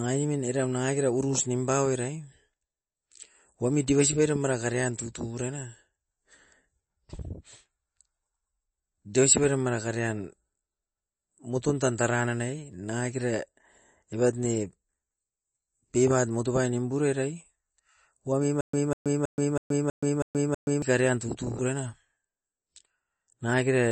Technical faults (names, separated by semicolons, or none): MP3 compression; stutter with silent gaps